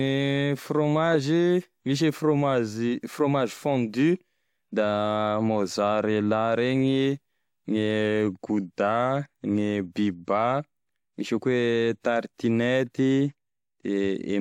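A short speech recording with no audible technical faults, as nothing in the signal breaks, distorts, drops out or changes level unexpectedly at any point.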